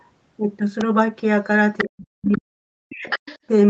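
At 0.81 s a sharp snap sits on top of the speech, a brief arc picked up by the audio line. It is likely an electrical switching spike from a nearby switch, motor or static discharge.

From 1.78 to 1.84 s a second voice comes through about 10 dB below the talker. This is the other side's voice leaking through, likely played on the talker's loudspeaker and not fully cancelled before reaching the microphone.

Straight after, from 1.84 to 2.61 s, the talker's voice sinks, dropping by as much as about 40 dB over roughly 0.7 s. This is speech suppressed in double talk. Both sides were likely speaking at once, and the echo canceller, unable to tell its own talker from the loudspeaker echo, turned both down. Inside that stretch, at 2.27 to 2.38 s, the other voice leaks again at about 15 dB down.

The pattern repeats from 2.84 to 3.27 s, with the talker ducked by up to about 40 dB for around 0.3 s. 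Leaked far-end speech overlaps it from 3.1 to 3.39 s at about 10 dB below the talker.

Throughout, nothing reaches above 8 kHz, which fits the Opus call path at around 24 kbps.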